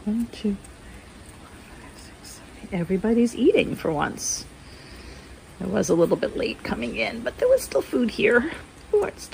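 No technical faults can be heard anywhere in the audio.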